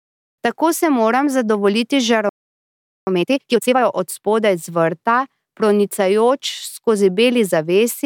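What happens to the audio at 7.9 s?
Nothing goes wrong at 7.9 s; the audio is intact through that moment, with no dropout, click, distortion or other fault.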